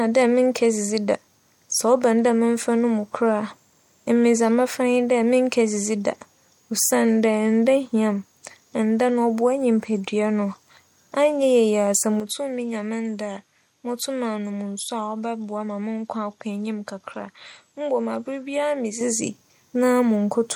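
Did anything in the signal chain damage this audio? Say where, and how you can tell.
Yes. An input switched to a poorer device from 12.20 to 19.01 s, likely at the driver stage. The speech abruptly loses everything above 13 kHz, drops a few dB and picks up faint new background noise.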